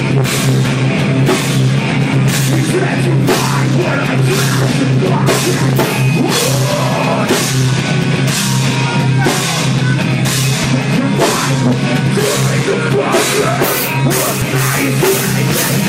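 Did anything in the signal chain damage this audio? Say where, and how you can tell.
Yes. Jumps at 10.64 s and 14.42 s skip ahead roughly one and two 32 ms frames: compressed frames skipped at the codec.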